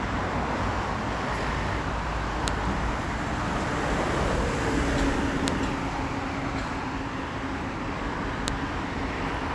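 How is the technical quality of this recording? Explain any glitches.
The recording is marred by three identical glitches. A file header played as audio snaps at 2.48, 5.48 and 8.48 s, every 3 s, where pieces were joined with headers left in, so header bytes play as samples: a sharp click, a vertical full-band line on a spectrogram, a near-instant spike in the waveform.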